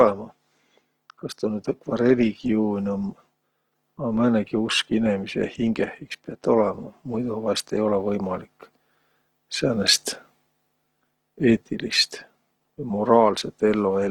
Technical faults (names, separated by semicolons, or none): Opus compression